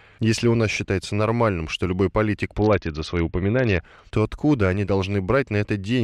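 From 2.57 to 3.81 s, after "нормальным что любой политик", a Bluetooth SBC bit pool drop starves the upper sub-bands. The speech turns dull and gritty. It recovers by "то откуда они".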